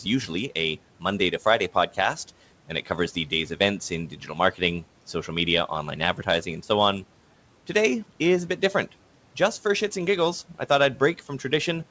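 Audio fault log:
3.15–3.6 s and 4.09–4.37 s, speech cut by the noise suppressor: within each span, parts of the speech dip by about 8 dB and then about 9 dB, for roughly a tenth of a second and around 150 ms, sounding swallowed rather than gone. The suppressor mistook these low-level stretches for the room noise, which sits about 24 dB below the speech. Unlike packet loss, there is no hard gap or glitch, only a fading that leaves the 8 kHz call bandwidth unchanged.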